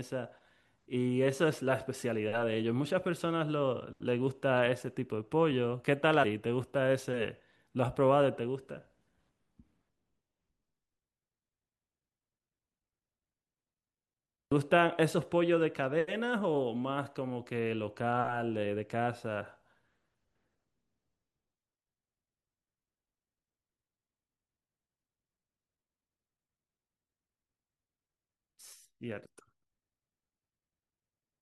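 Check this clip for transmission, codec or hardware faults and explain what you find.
Two dropouts of compressed frames skipped are audible in this speech. At 6.23 s roughly a tenth of a second of audio vanishes, and at 14.51 s about 150 ms. Whole frames of about 21.3 ms each were lost or rejected by the decoder, so playback leaps forward by several frame lengths. Each join is heard as the speech abruptly jumping ahead. On a waveform the envelope shifts abruptly, and a spectrogram shows harmonics breaking discontinuously at the join.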